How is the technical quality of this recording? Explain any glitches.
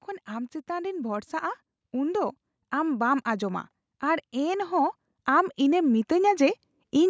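The one real glitch is automatic gain rising, running from about 0.27 s right through to 7.05 s. The gain control judged the input too quiet and kept nudging its level up, about 11 dB in all, so the speech and the background swell together as the clip goes on. The call microphone processing is audible too, with nothing above 8 kHz.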